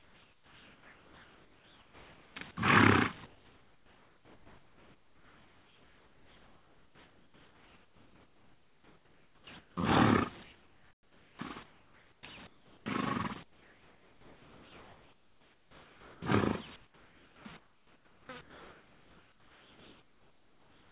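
From the start to 2.36 s, then 3.26–9.77, 10.43–12.86, 13.43–16.22 and 16.76 to the end, the real background gives way to comfort noise, a steady, featureless hiss, about 9 dB quieter in the first pause and 8 dB quieter in the fourth, likely from discontinuous transmission. At 9.75 s the returning sound starts abruptly, its first 20 ms lost as an onset clipped by the voice detector that likely reacted late. Throughout, nothing comes through above 4 kHz, which fits a narrowband G.711 call path.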